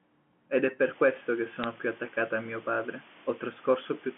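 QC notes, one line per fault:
0.80 to 4.17 s, low bit depth with dither: from 0.8 s the signal is carried on only 6 bits, with dither added before each value is rounded. The dither breaks the link between rounding error and the signal, so the error is spread as steady white noise. It is heard as a constant, even hiss, roughly 20 dB below the speech, that continues through pauses without gritty or level-dependent distortion.
1.64 s, bit errors on a digital phone line: the digital telephone line flips bits at a very low rate, well under a tenth of a percent. Each flipped bit corrupts one decoded sample. Here 2 frames are hit; an error that lands on the sign or a high-order bit gives a short, sharp tick over the speech. The narrow 150 Hz to 3.4 kHz telephone band stays intact.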